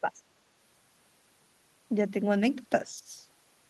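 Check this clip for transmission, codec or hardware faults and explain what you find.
One fault type appears twice. Speech suppressed in double talk at 0.01–0.24 s and 2.83–3.1 s: the speech level sinks, by around 15 dB and then 10 dB, likely because an echo canceller confused it with loudspeaker echo while both ends talked.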